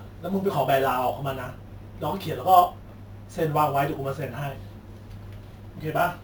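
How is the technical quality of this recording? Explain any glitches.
The quality is held back by one fault that runs through the whole clip. The speech carries a metallic fizz throughout.

The fault is imaging from sample-and-hold upsampling, present from start to end. The rate was raised by simply repeating each sample, with no smoothing filter afterward. That leaves mirrored copies of the speech spectrum above the original band. The first copy fills roughly 8 to 16 kHz, about 22 dB below the speech. This points to a 16 kHz source converted up to 44.1 kHz. The fizz rises and falls with the speech level. Its lowest copy moves opposite to the pitch of the voice.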